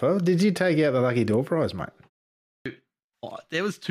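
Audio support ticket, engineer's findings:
Clipped start after a pause, 2.39–2.66 s: after "prize mate" and a 0.38 s gap, about 0.27 s of onset is missing. Waveform jumps from flat to full level; no spectrogram attack. Output device slow to wake.

Dropped samples, 3.28 s: single sharp click, a thin vertical line across the spectrogram and a step in the waveform. Likely a few samples lost from the stream, a fraction of a millisecond.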